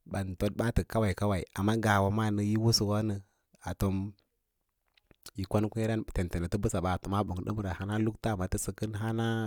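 Listening to the speech, nothing stood out as a technical problem.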